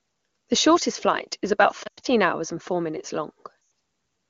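This is a short speech clip coded with AMR wideband (HD Voice), which sounds clean at what seems like one of its top rates, and it has two stretches of lost AMR speech frames. From 1.84 to 2.06 s, right after "shortest flight is about", the decoder keeps replaying its last good frame with falling gain, so the sound warbles and drops to near silence before "hours and four minutes". Another loss of about 100 ms hits at 3.61 to 3.71 s.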